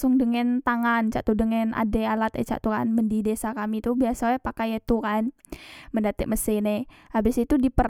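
No technical faults are audible anywhere in the speech.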